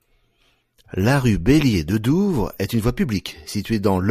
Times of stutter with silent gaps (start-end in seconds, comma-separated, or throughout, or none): none